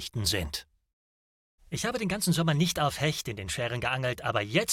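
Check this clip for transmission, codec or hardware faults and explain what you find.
Nothing in this audio points to a transmission, codec or hardware problem; it all sounds fine as it is.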